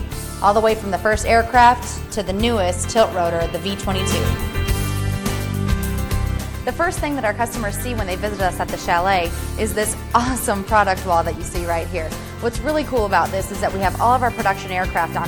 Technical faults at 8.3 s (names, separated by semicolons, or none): Bluetooth SBC bit pool drop